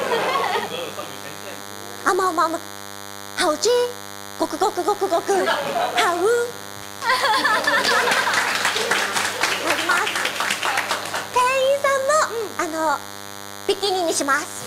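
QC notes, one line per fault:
Throughout: DECT cordless phone buzz. A steady, thin 100 Hz buzz with many harmonics sits about 15 dB below the sound. A nearby DECT handset or base bursts every 10 ms, and the audio circuit rectifies it.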